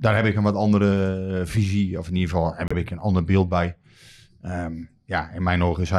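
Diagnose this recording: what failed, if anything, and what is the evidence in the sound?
Repeated frames in the codec or storage stage: the speech stutters at 2.68 s as a 78 ms block plays twice, lengthening the clip by 78 ms. A length that fits about three compressed frames separates this from a driver buffer repeat.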